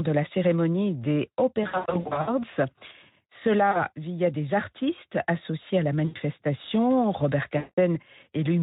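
VoIP packet loss concealed by the speech codec strikes at 1.63–2.34 s, 3.71–3.86 s, 6.05–6.17 s and 7.57–7.78 s. The decoder bridges each gap by extrapolating its last pitch and filter with falling gain, so the speech smears into a fading buzz or coloured noise and stays weak briefly after packets return. The first burst is worst, about 380 ms lost across 640 ms with runs up to 80 ms. The Speex coding underneath sounds lightly hoarse.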